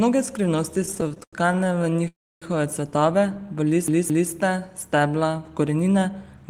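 Repeated stalls (stutter) run from 0.81 to 2.08 s, leading up to "cvetove v". Packets reached the receiver late or more slowly than playback consumed them, so the jitter buffer ran dry about 30 times in this span. Each time, the receiver extended the last bit of speech to fill the hole, the longest up to 90 ms. About 385 ms of filler sits inside those 1.26 s, roughly 30 percent of it, yet no speech is lost. The result is a dragging, hiccuping delivery.

A call audio freeze follows directly, from 2.08 to 2.44 s, still just before "cvetove v". The speech halts and the held sound dies away into about 280 ms of silence, so around 338 ms of hold and silence are inserted in total. The likely cause is packets being delayed in transit until the buffer emptied completely. When the speech resumes, it picks up exactly where it stopped, and nothing is missing. The stream now trails about 338 ms further behind.

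CD stuck on one turn appears from 3.88 to 4.31 s, right after "cvetove v". A scratch made the laser jump back one track at the same point on each rotation, so a 217 ms slice of speech is replayed twice. Each jump carries a brief mute, which produces the quick, evenly spaced stutter of a skipping disc. The speech cannot move forward until the loop ends.

A jitter buffer speed-up covers the last second, from 5.50 s to the end. The buffer had built up more audio than its target, so the receiver repeatedly cut out tiny pitch-period-sized fragments to reduce the backlog. Around 150 ms was trimmed in all. The speech plays at about 112 percent of normal speed with the pitch unchanged, so it sounds noticeably rushed but not higher.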